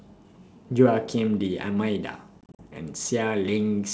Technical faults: packet loss on an ADPCM call

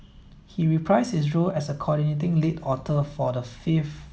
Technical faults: one channel drops out

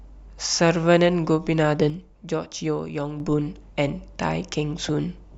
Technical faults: sudden gain jump; DAB burbling

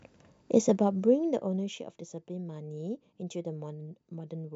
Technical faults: zipper noise

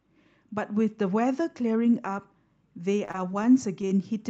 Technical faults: repeated packet loss (robotic sound); short concealed packet loss

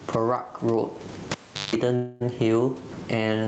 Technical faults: gain pumping; cable pulled and plugged in; call audio freeze

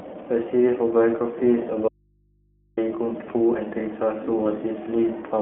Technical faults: iLBC codec; audio dropout to a faint residue; lost iLBC frames

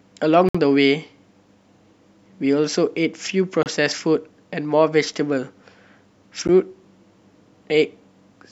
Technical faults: Bluetooth stall

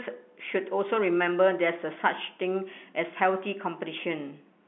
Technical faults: none

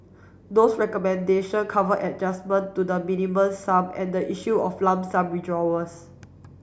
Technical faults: none

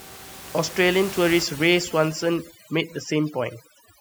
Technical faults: overdone noise removal

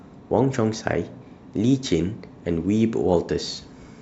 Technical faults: none

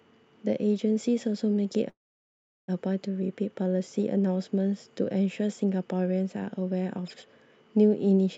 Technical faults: call audio freeze

